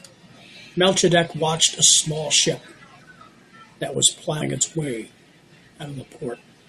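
At 4.40 s the speech jumps forward by around 150 ms as compressed frames are skipped: about seven frames of roughly 21.3 ms each were missing or rejected by the decoder.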